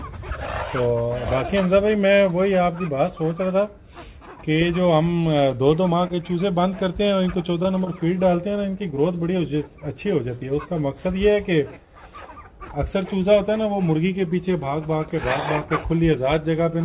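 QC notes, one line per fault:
6.07–6.12 s and 7.63–7.66 s, short stall from a late packet: a packet arrived late, the jitter buffer ran dry, and the receiver held the last sound for about 22 ms and then 16 ms until the packet arrived. Playback resumes from the same point, so nothing is lost. Unlike concealed loss, the sound does not smear across a gap. It is held too long, with a faint buzz or dip, and the timing slips slightly.
7.84–7.88 s, short concealed packet loss: about 20 ms of audio never reached the decoder. The receiver filled the gap by extrapolating the preceding sound and then blended back into the real signal. The result is a brief smear or wobble. This differs from the late-packet stalls just before it because content is actually lost rather than delayed, and the timing does not stretch. The audio is band-limited to 4 kHz throughout, consistent with the narrowband call path.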